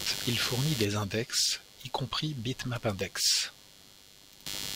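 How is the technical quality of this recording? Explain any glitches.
Technical quality is compromised by one fault running through the whole recording: computer activity noise. It sits underneath the speech from start to finish as a rapid, pulsing buzz, repeating at roughly a hundred pulses per second and only around ten decibels below the speech, so it is clearly audible. The cause is the computer's fluctuating workload, from processor, graphics or pointer activity, disturbing the ground reference shared with the audio circuitry. Because of that, the chirping, scratchy texture tracks the machine's activity rather than the speech itself.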